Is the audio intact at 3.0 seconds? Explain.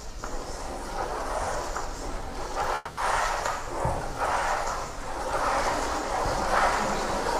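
No. A call audio freeze runs from 2.75 to 2.99 s: the last sound is stretched into a fading buzz or hiss for about 220 ms, likely because packets stalled and the jitter buffer emptied. At 3.0 s playback resumes intact but 220 ms late.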